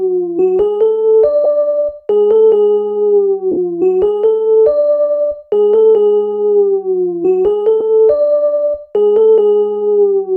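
Around 1.44 to 1.46 s there's a short dropout of lost LE Audio frames, about 15 ms, which fits two 7.5 ms LC3 frames going missing over Bluetooth. The decoder fills the gap by replaying the last spectrum with scrambled signs, so you get a brief noisy smear instead of silence. The longer one at 3.52 to 3.58 s covers about 52.5 ms, long enough that the smear starts fading out. At 7.80 s a single frame drops, just a tiny grainy blip.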